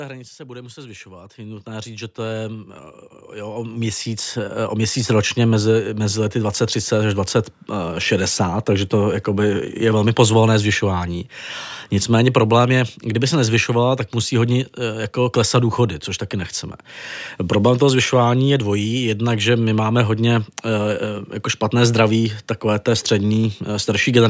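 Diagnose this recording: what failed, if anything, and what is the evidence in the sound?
Automatic gain rising occurs twice in the call processing stage: from 0.37 to 2.78 s the level climbs by about 12 dB, and from 3.32 to 5.24 s by about 8 dB. In both spans the speech and the background noise swell together over a couple of seconds. The gain control judged the incoming level too low and ramped its gain up slowly, so the noise floor rises along with the talker rather than staying put.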